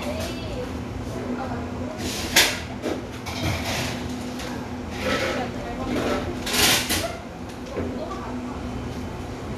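Sound recording, no technical faults detected.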